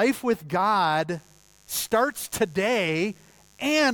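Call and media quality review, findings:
Mains buzz from 1.12 s to the end: steady raspy hum under the speech, fairly low, roughly 35 dB down. Probable dimmer, rectifier or unshielded cable letting in switching spikes twice per 50 Hz cycle, with harmonics up into the kHz range.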